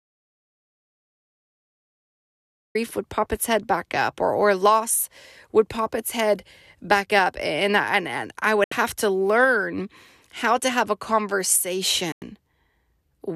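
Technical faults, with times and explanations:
0.00–2.75 s: audio dropout to silence, already under way as the clip opens; silence with no room tone until "would pop its head", likely a lost input.
8.64–8.72 s, 12.12–12.22 s: digital broadcast dropout; muted holes of about 72 ms after "and and I" and 96 ms, with 3 ms fades, fitting three and four lost frames.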